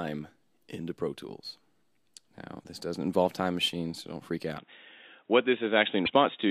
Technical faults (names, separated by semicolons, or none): broken MP3 bit reservoir; input switched to a poorer device